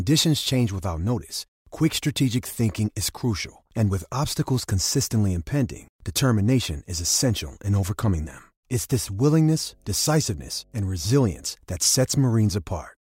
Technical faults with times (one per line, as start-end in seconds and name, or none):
9.23-11.50 mains hum